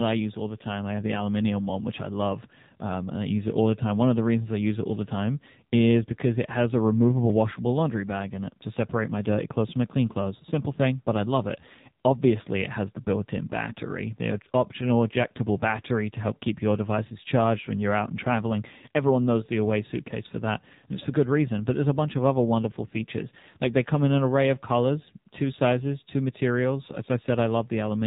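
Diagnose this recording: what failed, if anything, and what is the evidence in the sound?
The codec stage is where this went wrong: the whole recording has been through the AMR narrowband mobile codec. Nothing gets through above 3.8 kHz for the full length, so the speech sounds boxed-in and telephone-thin. The damage is plainly audible, with a buzzy, synthetic edge, which points to one of the lower AMR-NB modes, something like 7.4 kbps. At that rate the vocal-tract model is driven by too few pulses per subframe, and it can't rebuild natural texture.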